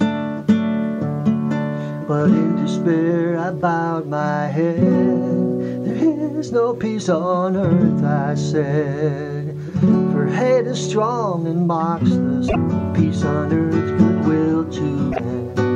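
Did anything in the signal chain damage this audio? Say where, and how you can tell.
Yes. Damaged data in a compressed stream, at the codec/storage stage: brief glitches at 12.48–12.56 s and 15.09–15.20 s, where the decoder misreads corrupt frames and loses sync. On a spectrogram these show as short broadband smears; the waveform shows abrupt discontinuities.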